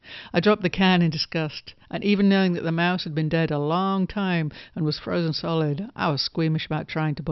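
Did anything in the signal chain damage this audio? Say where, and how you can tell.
No, nothing damaged this audio.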